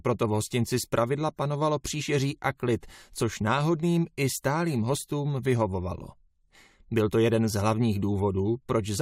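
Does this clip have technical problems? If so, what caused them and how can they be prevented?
No, nothing stood out as a technical problem when listening to this audio, so there is no cause to trace and nothing to prevent.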